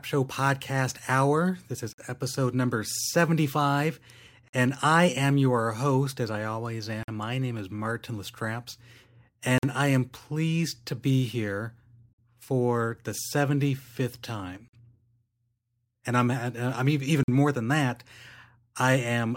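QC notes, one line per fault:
1.93, 4.48, 7.03, 9.58, 12.13, 14.68 and 17.23 s, gap between chunks: the speech drops out for 50 ms every 2.5 s, e.g. right before "and I am your" and "more than that". Nothing's missing, but the audio arrives in 2.5 s blocks with silence wedged in at each join.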